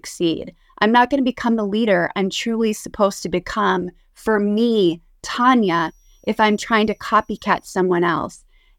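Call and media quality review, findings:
Switching supply whistle, 5.71 to 7.71 s, 2 s long. High, thin tone, wandering between 5.73 and 5.83 kHz. Sits about 45 dB below the speech. Probable component: a switching power supply near the capture chain. Mechanism: the regulator drops into light-load burst mode, and its burst rate lands in the audible band. The drifting pitch follows small load changes.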